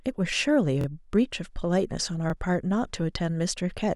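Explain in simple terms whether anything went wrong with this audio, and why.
Two brief stutters occur in this speech, both caused by a repeated buffer. At 0.81 to 0.86 s, the same 23 ms slice of sound plays twice more in a row. At 2.30 to 2.32 s, one slice repeats once. The playback device didn't receive fresh audio in time, so it replayed its last chunk, which fits a 1024-sample buffer. Each repeat joins abruptly, giving a quick stutter or click, though essentially no audio is lost.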